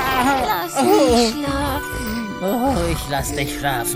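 No technical faults are audible anywhere in the audio.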